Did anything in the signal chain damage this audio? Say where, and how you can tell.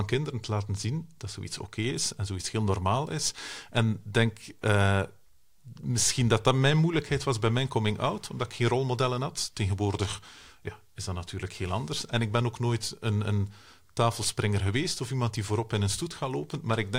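No, nothing in this speech recording shows damage from any stage of the signal chain. I can't hear anything pointing to a problem in the wiring, conversion, processing, transmission, storage or playback.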